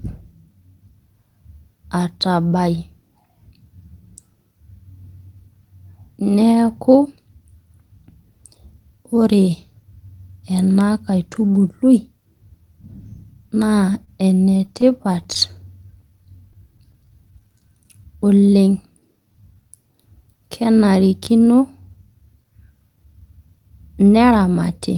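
From 13.93 to 16.95 s the speech stutters in a burst of repeated stalls. Packets arrived late or too slowly, so the jitter buffer kept running dry, and the receiver covered each of 22 brief gaps by extending the last sound. Together these fill about 243 ms, or 8% of the span, and the longest is only 27 ms. Nothing is lost, so what you hear is a choppy, catching rhythm rather than dropouts.

Overlapping that, from 16.1 to 19.7 s, a jitter buffer slow-down stretches the speech to 91% of normal speed. To rebuild its reserve, the receiver repeated single pitch periods and bits of pauses many times over, adding 319 ms in all. The pitch stays put while syllables drag and vowels draw out, sometimes with a slight warble. Unlike the stutter just before it, the flow is smoothly slowed rather than interrupted.

From 21.39 to 24.98 s the opposite happens in a jitter buffer speed-up. The buffer was holding more audio than its target, so the receiver trimmed short pieces of one or a few pitch periods again and again, removing roughly 0.4 s. 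The speech runs at about 110% with unchanged pitch and sounds hurried and compressed. That sets it apart from the earlier slow-down, and there are no catches like those of the stalls.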